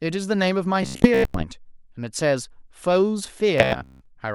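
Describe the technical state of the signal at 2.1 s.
At 2.1 s the speech signal is intact, with no dropout, distortion, glitch or other technical fault at that moment.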